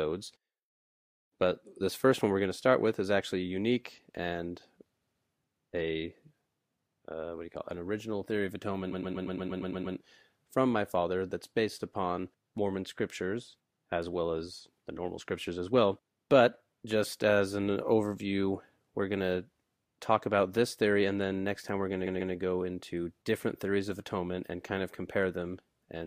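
At 5.00 s, repeated frames make the speech stutter. A 139 ms block, about six compressed frames, plays twice more, adding 0.28 s. From 8.91 to 9.96 s, a 116 ms block repeats nine extra times, adding over a second. At 22.06 s, the first pattern recurs.

At 25.23 s, a single sharp click is heard. Its likely cause is dropped samples, with a couple of samples missing. The waveform jumps straight to a later value. Nothing audible is lost, but the sudden step cracks briefly.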